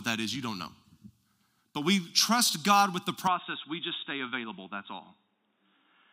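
At 3.27 s, right after "with the", the speech turns dull and boxy, with nothing above 3.8 kHz, a drop of about 5 dB, and a faint new hiss. This is likely an input switched to a poorer device, not a filter, since tone, level and noise change together.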